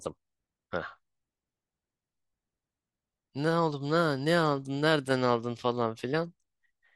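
Nothing in this speech recording stood out as a technical problem on listening.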